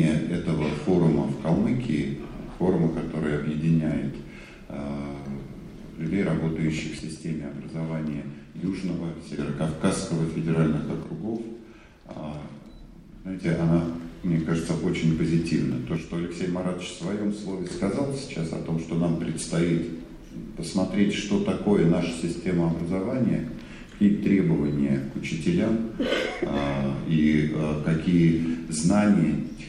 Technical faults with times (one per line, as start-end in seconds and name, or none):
6.99-9.39 one channel drops out
11.03-13.43 one channel drops out
15.97-17.71 one channel drops out